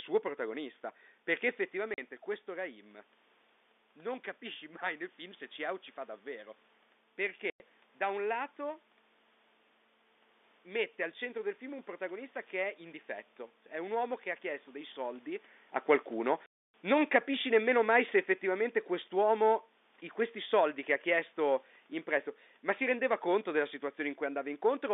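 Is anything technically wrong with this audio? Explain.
Yes, there are two problems. First, packet loss filled with silence: short holes at 1.94 s (40 ms, right after "protagonista perché"), 7.5 to 7.6 s (100 ms, just before "da un"), and 16.46 to 16.74 s (280 ms). Packets never arrived and the receiver inserted silence, so the sound cuts out with hard edges. The gap lengths fit 20 ms packets.

Second, automatic gain falling from about 16.1 to 23.54 s. The gain control decided the input was too loud or its background noise too strong and gradually pulled its gain down by about 6 dB. You hear the level sink steadily, with the background noise dropping along with it.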